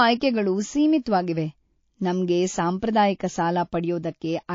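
Speech throughout carries plainly audible coding damage: the top end is cut off, and weak spectral detail flickers in and out between frames, giving a watery, swirly texture with metallic chirps on sibilants and softened consonant attacks. This is likely MP3 compression starved of bits, consistent with a low bitrate around 32 kbps, where the encoder drops the treble and zeroes quiet frequency lines to stay within budget. Two sharp onsets also show pre-echo: a hiss rising about 15 dB for 34 ms from 1.03 to 1.06 s, and about 14 dB for 30 ms from 2.79 to 2.82 s. The codec spreads quantisation noise across a whole transform block, so noise sized for the attack fills the quiet gap before it. A window of roughly 72 ms fits a long block used without switching to short blocks, which leaves these attacks smeared and preceded by noise.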